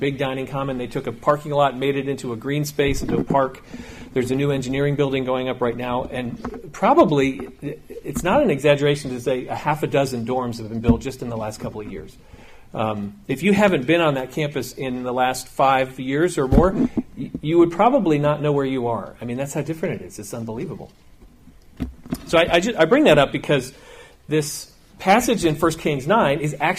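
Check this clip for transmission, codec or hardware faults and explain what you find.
Nothing turned up here. I listened through the whole thing and didn't catch anything worth flagging.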